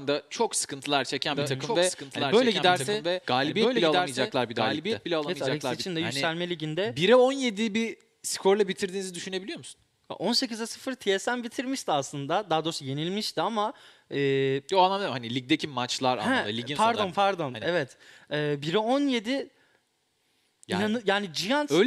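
From 1.29 s to 5.83 s there is a doubled audio track. A second full-band copy runs about one and a half seconds behind, about 5 dB quieter, with no room colour. It likely comes from a slower capture path mixed in. It cuts in and out abruptly.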